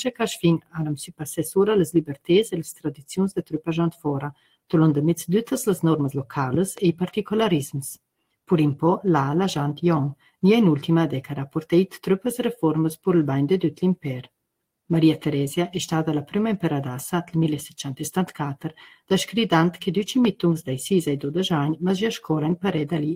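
A noise suppressor built for speech has been left on for the whole clip, and it treats sustained parts of the sound as noise. Level swings by roughly 5 dB as the processor keeps re-deciding what to keep, so held material sinks while attacks pass. The result is a pumping, thinned character that never settles.

The suppressor also cuts harder at specific points, pulling the sound down by about 16 to 21 dB. These deep dips fall at 0.58 to 0.78 s, 1.04 to 1.23 s, 2.08 to 2.30 s, 2.74 to 3.11 s, 3.36 to 3.68 s, 3.91 to 4.06 s, 4.32 to 4.73 s and 10.16 to 10.35 s. The deepest, about 21 dB, are the first two. Each lasts between about 0.15 and 0.4 s. Sustained and decaying portions sink in level or have their tails cut short, while sharper onsets survive. The first five seconds are dense with these holes.

Between 6.54 and 6.80 s there are two loud pops, peaking around 10 dB above the surrounding sound, which continues underneath. 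They are sharp, abrupt transients. The likely cause is a sudden voltage step or pulse entering the signal path, such as a connector being disturbed, a switch, a static discharge or a driver glitch, which the downstream circuitry shapes into a brief click or thump.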